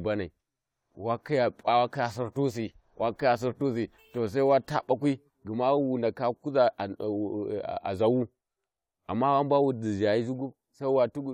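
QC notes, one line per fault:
No faults found in this speech clip. Nothing heard in the recording needs a QC entry.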